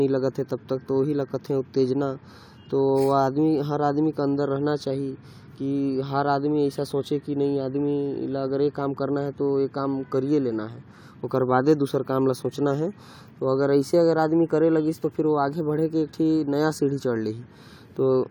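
Nothing in the recording stands out as a technical fault anywhere along its run, so there's nothing to pin to a time here.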